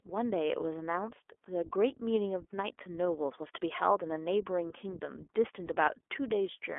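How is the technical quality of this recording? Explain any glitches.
The speech is carried through the iLBC codec. It is band-limited to about 300 to 3400 Hz, coded at 15.2 kbps, and it sounds audibly rough and synthetic from coarse excitation coding.

Lost iLBC frames occur at 4.14–4.16 s and 5.66–5.69 s. Each gap fits one missing 20 ms frame that the decoder fills by repeating the last pitch cycle with noise. Each is heard as a brief buzzy, held vowel that recovers immediately.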